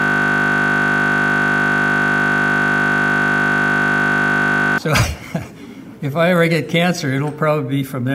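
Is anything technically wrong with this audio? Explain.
Yes. A system hang loop is already under way when the audio begins and lasts until 4.78 s. A frozen driver left the hardware replaying one 20 ms buffer, producing a steady 50 Hz buzz. The waveform shows identical repeating cycles, and the spectrogram shows flat harmonic lines spaced 50 Hz apart.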